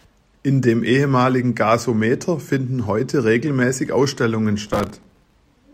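From 4.67 to 5.34 s, processor overload crackle: dozens of missed few-millisecond buffers replay stale audio, forming gritty tearing across the speech rather than one isolated click.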